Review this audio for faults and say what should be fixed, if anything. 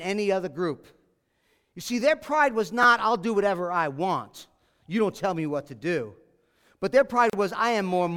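A repeated buffer sits at 2.83 to 2.85 s. The playback device ran short of fresh audio and replayed its last 10 ms block twice more. That brief loop sounds like a small buzzing click. No speech is skipped. A larger output buffer or faster delivery of audio to the device would prevent it.

A gap at a join of encoded pieces opens from 7.30 to 7.33 s. Two separately encoded sections were spliced without trimming. The encoder's start-up delay and end padding left a silence of about 35 ms. The speech then resumes where it stopped. Encoding the speech in one pass, or trimming the delay and padding before joining, would prevent it.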